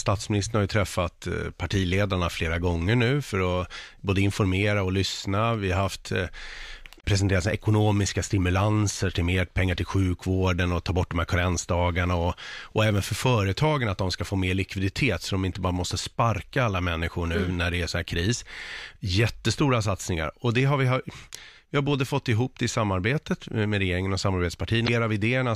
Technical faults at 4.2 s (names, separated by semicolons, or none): none